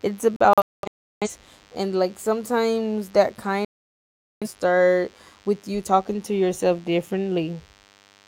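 A nearby DECT cordless phone or base station is pulsing its radio every 10 ms, and the audio circuitry rectifies those bursts into DECT phone buzz. A thin, steady 100 Hz buzz with a dense row of harmonics sits under the speech for the whole clip, roughly 35 dB below it.

From 0.36 to 1.29 s, the receiver loses the digital signal or rejects corrupted frames and mutes, causing a digital broadcast dropout. The speech breaks into scattered silent holes totalling about 640 ms, the longest about 340 ms. It happens again from 3.65 to 4.48 s, after "like sometimes that", with about 770 ms lost before "start with you talking".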